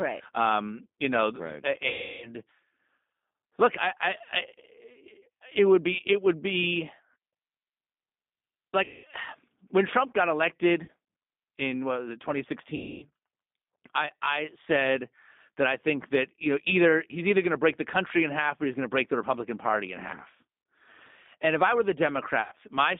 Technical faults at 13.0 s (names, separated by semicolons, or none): G.729 codec; VoIP packet loss concealed by the speech codec